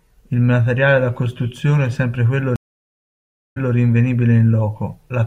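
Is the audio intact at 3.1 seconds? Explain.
No. From 2.56 to 3.73 s the speech drops into 1.0 s of silence, then resumes 0.17 s earlier: a stream reconnect restarting the decoder mid-stream.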